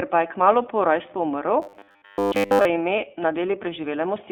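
The iLBC codec shapes the whole clip: a narrowband VoIP coder whose character fits its 15.2 kbps, 20 ms frame mode. Each frame's excitation is coded on its own, without borrowing from the previous one, which leaves the speech with a plainly audible rough, slightly synthetic grain. The band is squeezed to roughly 250 Hz to 3.6 kHz, and nothing above 4 kHz survives, so the sound is thin and lacks any airy top end.

Robotic sound from repeated short buffers takes over from 1.62 to 2.65 s, right after "kmalu po rojstvu umrl". A rigid, metallic buzz at 100 Hz is imposed on the voice while still loosely tracing the speech underneath. That fixed pitch points to a roughly 10 ms chunk being looped. Fresh audio was likely arriving too seldom, so the playback side filled the gaps by repeating its last short buffer, and most of the real audio in that stretch was skipped.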